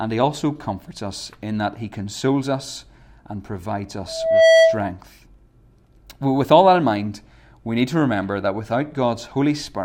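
At 4.07 s a loudspeaker feedback squeal kicks in and runs to about 4.88 s. The mic is picking up the speaker it feeds, and at around 651 Hz the loop has more than unity gain, so that one frequency keeps feeding itself. You hear a single tone swell up over roughly 0.4 s until it sits about 10 dB above the speech, a clear howl riding over everything until it cuts off.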